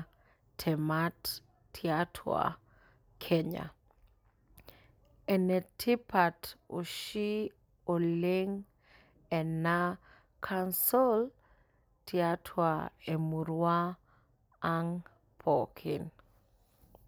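No audible technical faults.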